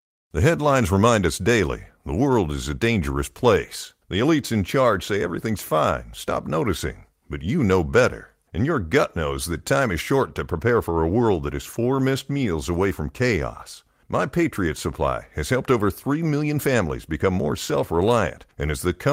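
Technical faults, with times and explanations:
11.73 to 11.75 s, lost packet rebuilt from error correction: one stretch of the stream never arrived, which points to a single lost packet. The packet after it carried a low-bitrate backup copy of that audio, and the decoder played the backup instead of leaving a hole. The speech therefore runs on without a gap. For about 20 ms, though, it turns briefly rougher and grainier, because the backup was coded far more coarsely than the surrounding frames.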